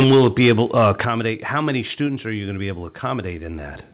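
From 0.0 to 0.9 s the speech carries microphone overload: the loudest syllables are flattened at the converter's ceiling, with peaks pushed about 7 dB past full scale and a few percent of samples clipped. That gives a harsh, crackly edge only on the strongest moments, likely from an input gain set too high. Unlike codec distortion, it rises and falls with loudness rather than sitting evenly across the sound.

The microphone volume is stepped down three times: at 0.04 s by about 4 dB, at 1.05 s by about 8 dB just before "how many", and at 2.07 s by about 3 dB between "how many" and "are you going to". Each is an instant, clean drop in level that takes the background down with the speech, with no added distortion, likely from call software cutting the device gain after overloaded peaks. A compressor would instead pump and recover.

Beneath all this, the band stops at 4 kHz, which fits a narrowband call codec such as G.711.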